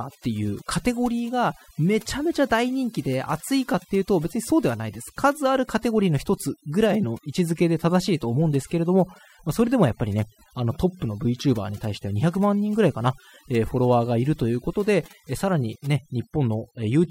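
Overdone noise removal runs through the whole speech clip. A noise reduction stage set far too aggressively keeps cutting individual frequency bands whenever they sit close to its noise estimate, removing quieter parts of the voice too. The gaps fall to near silence with twinkling specks.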